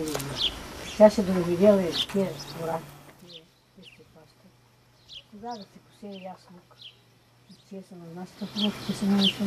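Nothing stood out as a technical fault on listening.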